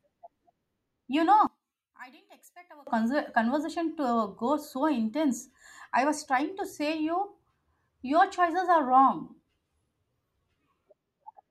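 One channel inverted, from 1.47 to 2.87 s: the speech drops by about 24 dB to a faint copy, its centre nearly gone. The likely cause is one stereo channel with reversed polarity, cancelling the shared content in a mono sum.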